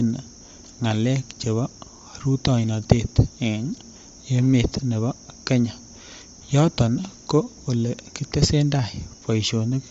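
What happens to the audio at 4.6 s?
At 4.6 s, as throughout the speech, nothing reaches above 7.7 kHz, and a grainy, breathy edge suggests likely Bluetooth LC3 compression, whose noise-filled spectrum sets it apart from a clean low-pass.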